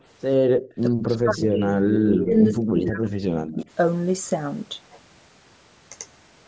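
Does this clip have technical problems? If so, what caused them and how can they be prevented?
Yes. From 0.57 to 0.71 s the room sound drops by about 37 dB. This is background gated by the echo canceller, which clamps the microphone while the loudspeaker plays. Gentler suppression settings would prevent it.

From 0.99 to 3.14 s and 3.31 to 3.65 s the speech dips by up to about 40 dB. This is likely speech suppressed in double talk: the canceller mistakes the overlapping talker for echo. Better double-talk detection or a headset would prevent it.

A delayed copy of the speech, 102 ms late and roughly 10 to 20 dB quieter, appears at 1.54 to 1.65 s, 1.91 to 2.26 s, 2.53 to 2.60 s and 3.46 to 3.55 s. This echo leak is likely loudspeaker sound that the canceller failed to remove. Headphones or a better-tuned echo canceller would prevent it.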